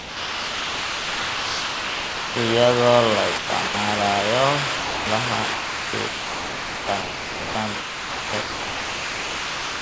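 Speech over a call path with nothing above 8 kHz, consistent with a G.722 wideband codec, and room noise about 25 dB below the talker. From 0.0 to 2.36 s and again from 4.76 to 5.06 s, the speech gives way to steady comfort noise. This is likely sound dropped by the voice detector, which took the sound for background and stopped sending. Between 3.38 and 3.74 s and from 5.54 s to the end, the speech cuts in and out, with holes filled by comfort noise, likely sound chopped by the voice detector as it repeatedly toggled transmission.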